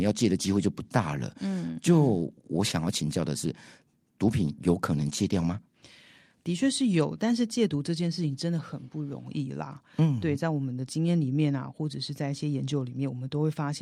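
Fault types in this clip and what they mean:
Nothing stood out on listening to this speech recording.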